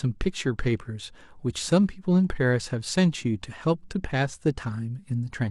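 A speech recording with no technical faults to be heard anywhere in it.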